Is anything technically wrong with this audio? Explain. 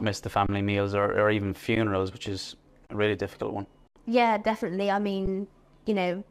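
Yes. The audio has repeated underruns with held sample. They occur at 0.46 to 0.49 s, 1.76 s, 2.87 to 2.89 s, 3.88 to 3.96 s, and 5.26 s. The output buffer ran dry, so the converter froze on its last value. The waveform goes flat, and the sound simply stops. The longest gap lasts 82 ms. The 23 ms gaps fit a 1024-sample buffer. Playback resumes where it left off, with no audio lost, so each restart is soft.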